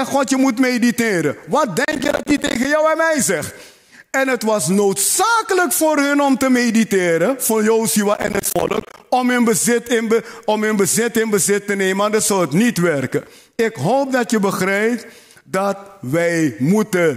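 Two bursts of processor overload crackle turn up, one from about 1.85 to 2.65 s and another from 8.14 to 9.04 s. In each, the processor is falling behind and missing buffer deadlines over and over, and every miss drops in a short hole of silence with hard edges. Dozens of those in under a second pile up into a gritty tearing over the sound. The spacing suggests buffers of around 10 ms, and the crackle stops the moment the load eases.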